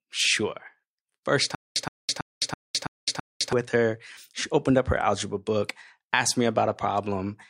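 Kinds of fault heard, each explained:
Stutter with silent gaps: playback likely stalled and kept retrying, replaying the last fragment of about 120 ms six times, each followed by about 210 ms of dead silence, so the speech jerks at a steady 330 ms pace from 1.55 to 3.53 s before resuming on "with her".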